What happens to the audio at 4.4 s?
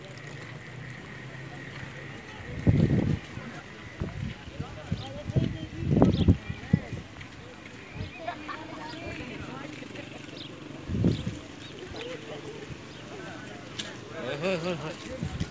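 At 4.4 s you're in the middle of a stretch, from 3.3 to 6.4 s, where the resampler restarted on every block. Each chunk got converted in isolation, so at every edge the filter was missing its real neighbouring samples and left a small error behind. You hear it as a steady tick at 10 Hz, one every 100 ms, riding on the signal. That fits 100 ms blocks, and it sounds like a downsample from 44.1 kHz to 16 kHz.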